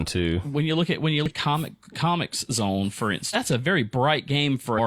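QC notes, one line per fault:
1.26–1.32 s, 3.30–3.36 s and 4.74–4.79 s: damaged data in a compressed stream. After "look at when you", after "comic comics zone for", and near the end, corrupt frames make the decoder lose sync, giving short glitches.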